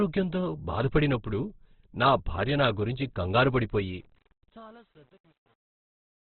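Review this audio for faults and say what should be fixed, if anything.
A very low-rate encode, likely Opus in CELT mode at about 12 kbps, narrows the band to nothing above 4.4 kHz throughout, leaving the speech muffled, grainy and rough.

From 3.76 s to the end at 6.21 s there is truncation distortion on the fade. The fade stage keeps too few bits and adds no dither, which fits a 9-bit path. From 4.11 s onward the fade's quiet tail turns gritty.

To prevent both, encode at a higher bitrate with full bandwidth, and apply fades at high bit depth with dither before any final word-length reduction.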